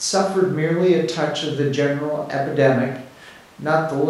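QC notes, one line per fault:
No technical faults are audible in the speech; the signal holds steady, with no breaks, level jumps or added noise.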